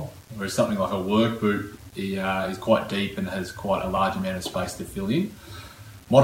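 From start to finish the audio carries a grainy, gritty distortion that tracks the sound, sitting roughly 30 dB below the signal, with quiet passages turning rough. This is likely low bit depth without dither, rounded to around 8 bits with no noise to decorrelate the error.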